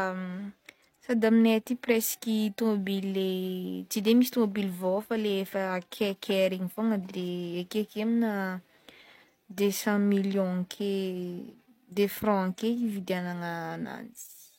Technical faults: repeated frames

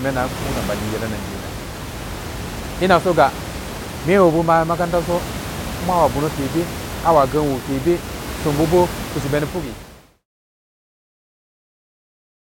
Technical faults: none

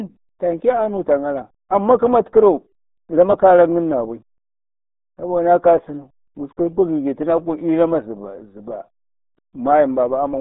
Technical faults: RealAudio 14.4 codec

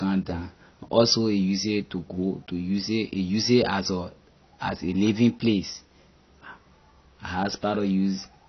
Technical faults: AAC compression

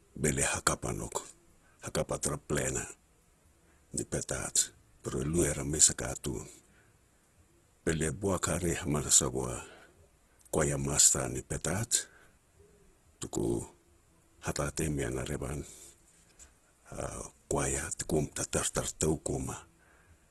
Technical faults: Opus compression

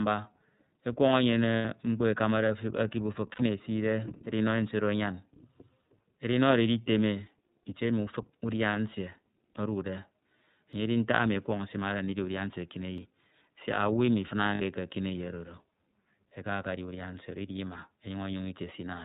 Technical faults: iLBC codec; lost iLBC frames; dropped buffer (overrun)

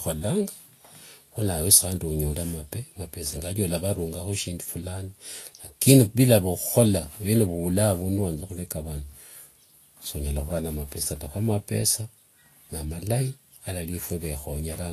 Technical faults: Vorbis compression

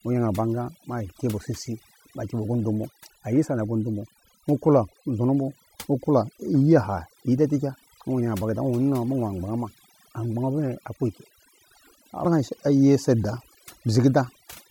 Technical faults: overdone noise removal

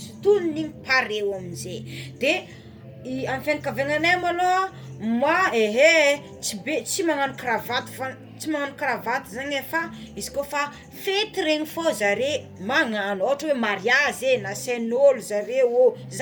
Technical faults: Bluetooth LC3 compression

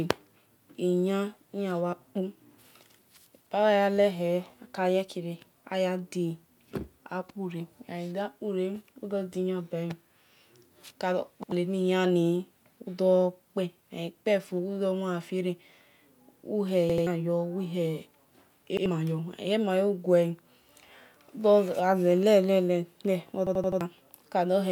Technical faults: repeated buffer

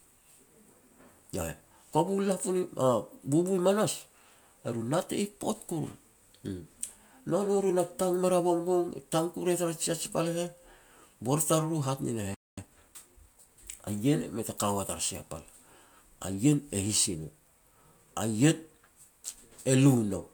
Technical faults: playback stall; time-compressed catch-up

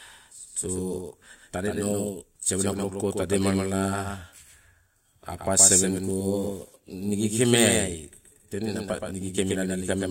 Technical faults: doubled audio track

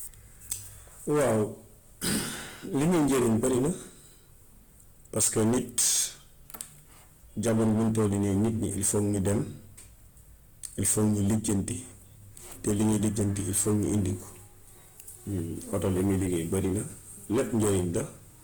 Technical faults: hard clipping; Opus compression

